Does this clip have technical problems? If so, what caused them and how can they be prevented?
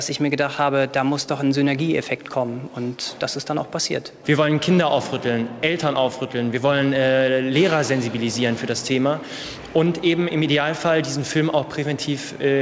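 Yes. Clock drift between sender and receiver is present: the sender's audio clock runs about 2 percent slow, so the receiver's jitter buffer keeps running short. Unlike random network jitter, the timing stumbles all lean one way, toward stretching, and never recover. Locking both ends to a common clock, or resampling at the receiver against a measured clock ratio, prevents it.

Repeated timing corrections run from 0.18 s to 12.61 s. The receiver keeps repeating short slices to fill the gap, so the sound plays at about 97 percent speed and gains roughly 300 ms overall. Unlike packet-loss concealment, these are small, unevenly spaced hiccups. A drift-aware adaptive resampler prevents this by adjusting the rate smoothly instead of patching in repeated slices.

The G.722 call path at 64 kbps contributes the expected absence of content above 8 kHz.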